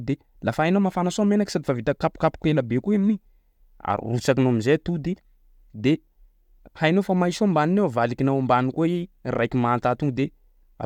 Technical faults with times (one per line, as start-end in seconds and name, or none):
0.11-10.85 clock slip clicks